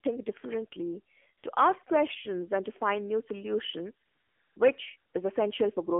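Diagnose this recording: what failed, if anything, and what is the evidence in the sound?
Codec stage: AMR narrowband mobile codec throughout. Nothing passes above 3.4 kHz, and the sound is buzzy and synthetic, which fits a low-rate mode near 7.4 kbps. Simple band-limiting would only muffle.

Call processing: AMR comfort noise at 1.38–1.44, 1.84–1.86, 4.06–4.56 and 4.98–5.14 s. Speech frames stop and smooth generated noise switches in. A network dropout would leave silence or a glitch instead.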